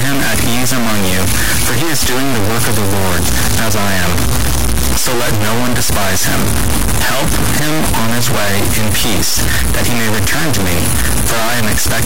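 The audio carries harsh, buzzy distortion from start to finish. Quiet passages fill with loud noise rather than falling silent. The error step is large, around -10 dBFS. This points to a high-order stuck bit, likely from a broken data line or converter.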